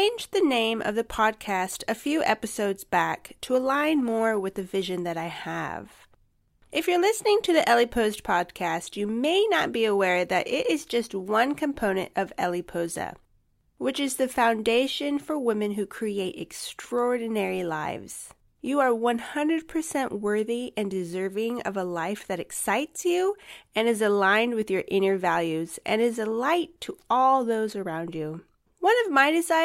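No technical faults can be heard anywhere in the recording.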